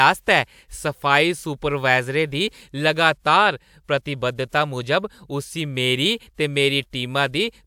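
No technical faults can be heard anywhere in the speech recording; the signal stays continuous and steady throughout.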